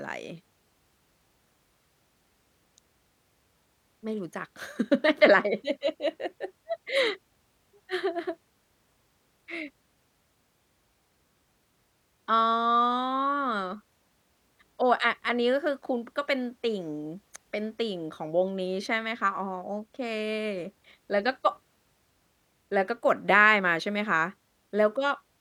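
No technical faults occur at any point in the recording.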